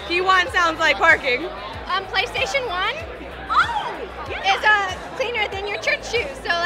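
No technical faults are audible.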